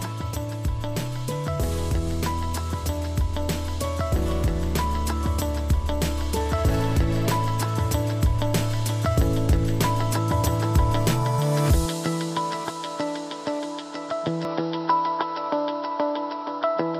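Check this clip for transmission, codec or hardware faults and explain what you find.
One fault, near the end. From 14.45 s to the end, the input likely switched to a poorer device. Nothing survives above 5.7 kHz, so the sound turns duller, with faint new background noise and no gap.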